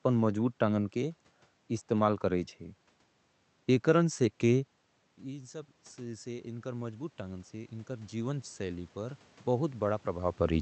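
Around 4.5 s the talker moves away and the input drops by about 15 dB. From 5.22 s to 10.4 s, automatic gain rising follows. The control slowly adds about 10 dB. Voice and room noise swell together, and the level never fully recovers.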